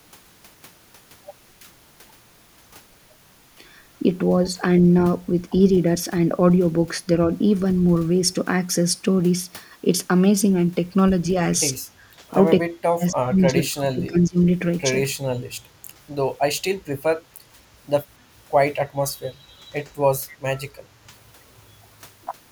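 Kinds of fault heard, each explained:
DC step: the waveform's zero line jumps to a new offset at 4.75 s and stays there to the end, heard as a single low thump while the speech carries on unchanged; unlike a dropout or click burst, nothing is lost, only the baseline shifts.
Speech suppressed in double talk: from 12.63 to 14.38 s the talker's speech is pushed down hard, by roughly 40 dB at its deepest, with about one and a half seconds affected, likely an echo canceller mistaking both talkers for echo; unlike a dropout, the level dips and recovers.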